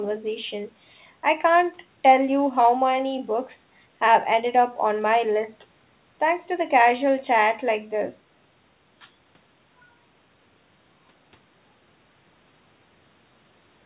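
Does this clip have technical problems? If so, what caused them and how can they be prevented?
No, this clip has no technical problems, so nothing needs to be prevented.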